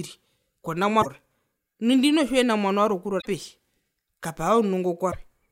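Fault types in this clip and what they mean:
Damaged data in a compressed stream: stretches of the encoded speech arrived corrupted, so the decoder misread those frames, lost its sync and had to hunt for the next valid frame header before resuming. Here it shows up three times, at 0.98 to 1.06 s, 3.18 to 3.26 s and 5.08 to 5.15 s, each a short disruption of roughly 70 to 85 ms before normal decoding returns.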